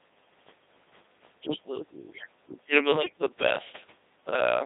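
From start to finish the speech passes through a Codec 2 vocoder, with the heavy, buzzy synthetic quality that fits its 2.4 kbit/s mode. Only pitch, voicing, energy and spectral envelope survive, so the decoder rebuilds the voice from sine waves, band-limited to roughly 150 Hz to 3.7 kHz.

From 2.92 to 3.22 s, bit errors on digital voice radio corrupt the vocoder parameters. The synthetic voice jumps in pitch, level and tone colour, warbling into robotic gibberish. The damage sounds like about nine frames hit, which points to a bit error rate of a few percent.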